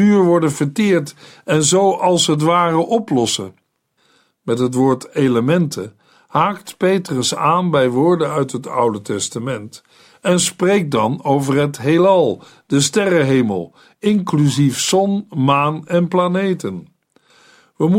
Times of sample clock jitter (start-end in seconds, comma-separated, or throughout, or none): 14.83-17.98